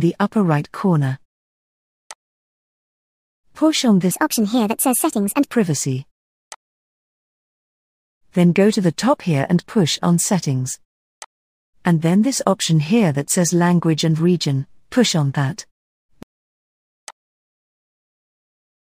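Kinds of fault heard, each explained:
Section at the wrong speed: from 4.11 to 5.52 s the sound runs at 1.45 times its recorded speed, so pitch jumps up by roughly seven semitones and timing hurries, then both snap back, likely from that stretch being played against the wrong clock.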